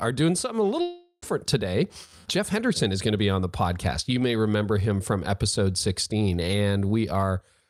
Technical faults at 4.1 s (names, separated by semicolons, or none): none